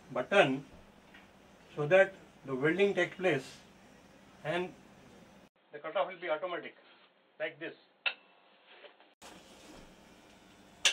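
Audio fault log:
5.48–9.22 s: input switched to a poorer device. After an 80 ms silence the sound turns dull and boxy, with nothing above 4.3 kHz, falls roughly 10 dB, and carries a faint new noise floor, likely because the input jumped to a narrower-band microphone or headset profile.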